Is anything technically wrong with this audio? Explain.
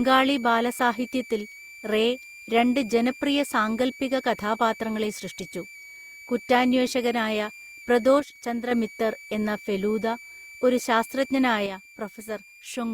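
Yes. A switching supply whistle runs throughout: a high tone drifting between about 2.25 and 2.41 kHz, roughly 20 dB below the speech, from a power supply's audible switching.

At 8.20–8.71 s and from 11.66 s to the end, the level abruptly falls by about 6 dB, most likely because one channel drops out before the mono sum.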